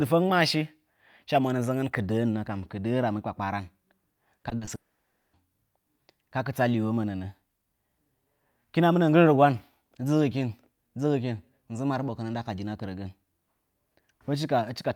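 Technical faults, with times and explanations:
4.39–4.69 s, repeated packet loss (robotic sound): Several short holes open up, none longer than 40 ms. Together they remove about 120 ms, roughly 40% of this stretch. Each hole is patched by stretching the previous sound, so the speech turns choppy and robotic.
4.75–5.35 s, long network dropout: About 580 ms of speech is missing. A brief smeared continuation fades almost at once, leaving about 560 ms of silence before the audio resumes further on. The likely cause is a network outage with no packets arriving.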